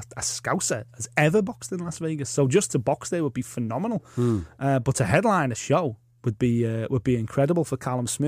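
A speech clip with CD scratch ticks: right after "has ever", four small ticks run from about 1.42 to 2.24 s, the longest around a millisecond. A scratch or blemish on the disc wiped out more data than error correction could rebuild, once per revolution, so the player patched or muted those samples.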